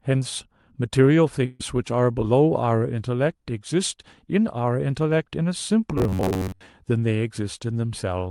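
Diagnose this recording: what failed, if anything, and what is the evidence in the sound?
A burst of packet loss on the network path runs from 1.45 to 1.61 s. For 140 ms, concealment extends the last received sound and fades it. Playback then resumes with 140 ms of the original audio skipped.

Robotic sound from repeated short buffers appears from 5.98 to 6.66 s: a rigid, metallic buzz at about 94 Hz loosely tracks the speech, with most of the real audio replaced. The likely cause is a starved buffer repeating a segment about 10.7 ms long.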